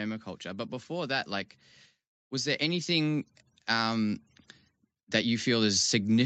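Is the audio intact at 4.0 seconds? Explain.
No. Automatic gain rising runs from 2.29 to 4.22 s. The gain control judged the input too quiet and raised it gradually. Voice and background swell together by about 4 dB.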